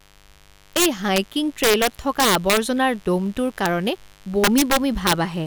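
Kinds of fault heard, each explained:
Mains buzz: A steady, raspy 50 Hz buzz with harmonics runs under the whole speech, sitting well below it, roughly 35 dB down.
Integer overflow: Loud peaks wrap to the opposite sign instead of limiting. Violent cracks occur at 0.77–1.18 s, 1.64–2.58 s, 3.66 s and 4.44–5.13 s.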